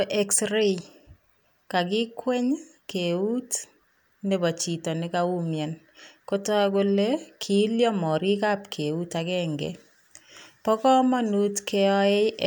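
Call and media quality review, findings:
No faults found in the speech recording. No impairment heard on the call or media path.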